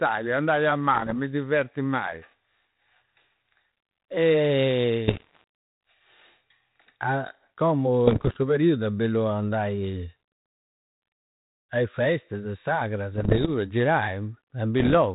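Pops and rough, gritty bursts with brief level jumps hit at 0.94–1.14 s, after "andai a", then 5.08–5.44 s, 8.06–8.37 s before "periudu è bellu andai", 13.14–13.5 s and 14.8–14.97 s. These are bit errors on an ADPCM link. Flipped bits, around one to two percent, throw off the decoder's step size and predictor, so each error rings on for milliseconds.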